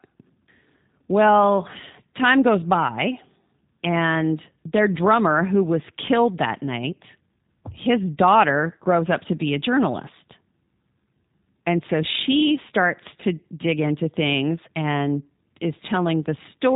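Speech passed through a G.729 codec for the whole clip. It rebuilds each short frame from a vocal-tract filter, a pitch predictor and a few coded pulses rather than the actual waveform, at a rate that fits the 8 kbit/s G.729A variant. The coding damage is plainly audible: the speech sounds rough and slightly synthetic, with a buzzy, processed edge, and nothing above 3.8 kHz survives, which leaves it dull and telephone-narrow.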